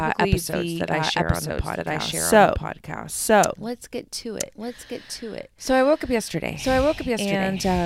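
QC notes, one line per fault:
Throughout, doubled audio track: a dry, equally loud copy of the speech trails by about one second, likely a second, slower capture path mixed in.
1.99–5.10 s, sample clock jitter: after "I share on the", an unsteady converter clock mistimes samples by a couple of microseconds, adding roughness about 30 dB down that grows with loud, bright speech.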